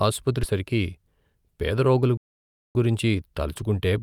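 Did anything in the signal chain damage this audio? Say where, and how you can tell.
Yes. At about 0.43 s there is a skip ahead in the network and jitter-buffer stage. Roughly 0.4 s of speech is missing, and the two sides are butted together with no fill, so the delay drops by about the same amount. On a waveform the envelope changes abruptly at the splice. On a spectrogram the formant and harmonic tracks break and restart somewhere else, with no silent gap or smeared transition between them.

From 1.08 s to 1.82 s the jitter buffer speed-up shortens the speech to 106 percent speed. The buffer had built up too much delay, so it removed short pitch-period-sized pieces again and again, roughly 50 ms in total. The pitch stays the same, so the harmonic spacing on the spectrogram doesn't change, but syllables are compressed in time and sound slightly hurried. A zoomed waveform shows periodic cycles quietly dropped.

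From 2.17 s to 2.75 s a playback stall cuts the sound off mid-flow for about 0.58 s. The waveform goes flat and the spectrogram shows an empty vertical band across all frequencies, with hard edges on both sides. The sound then carries on again. The likely cause is the playback stage running out of data or its output thread being blocked, leaving the device outputting zeros until it recovered.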